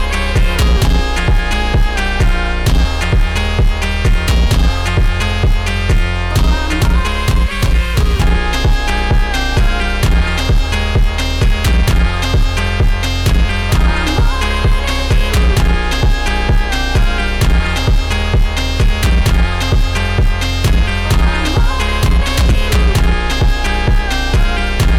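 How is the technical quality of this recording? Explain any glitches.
No glitches or faults detected.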